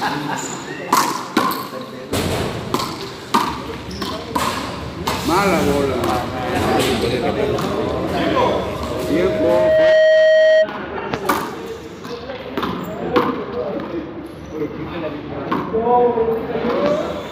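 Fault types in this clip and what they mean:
Loudspeaker feedback squeal: a pure 628 Hz tone swells over about a second and a half from 8.55 s into a howl around 10 dB above the surrounding sound, cutting off at 10.72 s, because a microphone picks up its own loudspeaker and that frequency keeps reinforcing itself.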